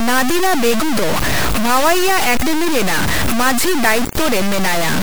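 From start to finish the speech is coarse and grainy. The grit follows the voice and sits nearly as loud as it. Quiet parts sputter or drop out. This is likely low bit depth without dither, which fits truncation to about 3 bits.

At 0.81 s and 2.41 s, compressed frames are skipped. Each time the audio jumps ahead by about a tenth of a second. That fits a few lost frames of 24 ms.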